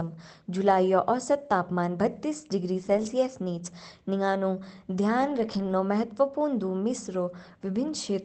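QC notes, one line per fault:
2.81–3.07 s and 5.21–5.71 s, lost packet rebuilt from error correction: packets went missing in the Opus stream, about seven in the first run and thirteen in the second, and the decoder filled each with the low-bitrate copy carried in the following packet, about 140 ms and 260 ms rebuilt. Nothing drops out, but those stretches turn rougher and noisier, with the call path's 8 kHz bandwidth unchanged.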